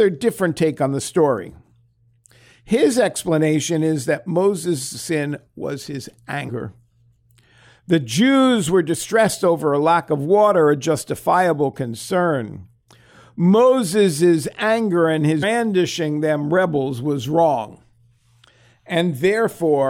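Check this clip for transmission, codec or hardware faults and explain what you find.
Two brief faults of the same kind are present. Damaged data in a compressed stream occurs at 6.48 s, just after "was his", and at 15.42 s, just after "anger and". Corrupted bytes make the decoder misread frames and lose sync until the next frame header, producing a chirp, click or short hole lasting about 18 ms each time.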